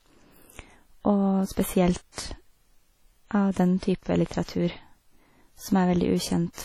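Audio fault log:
throughout WMA compression: heavy codec damage, likely from WMA at a bitrate consistent with about 32 kbps. Weak spectral lines are zeroed and long-block quantisation noise smears, giving washy, ringing speech with breathing hiss. The spectrogram shows patchy, holed bands and nothing above 19.7 kHz.
1.52–1.57 s, 2.12–2.18 s, 3.53–3.56 s, 3.79–3.83 s, 4.44–4.48 s pre-echo: block noise sized for a sharp onset spills 31 to 58 ms ahead of it, so each attack is preceded by a short hiss and sounds smeared. The waveform shows a low noise ramp before the transient, and the spectrogram shows a broadband haze before it.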